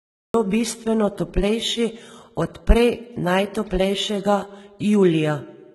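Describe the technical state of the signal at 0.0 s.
At 0.0 s the signal is in a cut-off start: digital silence runs from 0.0 to 0.34 s, then speech begins abruptly mid-sound with no attack or fade-in. Unlike a dropout, nothing precedes the silence, so the capture simply began late rather than losing a stretch.

The same moment also carries heavy HE-AAC compression damage. The treble is bright but gritty, with metallic, lispy sibilants, which likely comes from spectral band replication copying lower bands upward at a very low bitrate, around 16 kbps. Unlike a plain low-pass, the highs are present but synthetic.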